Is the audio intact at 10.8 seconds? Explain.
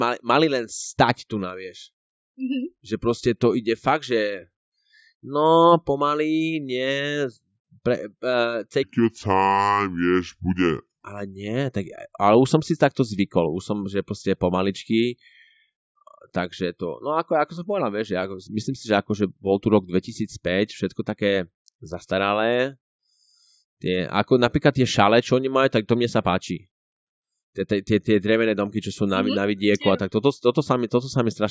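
No. A wrong sample rate affects 8.83 to 11.04 s. Speech slows to 0.73 times speed and drops about 5.5 semitones, which fits 22 kHz audio played at 16 kHz.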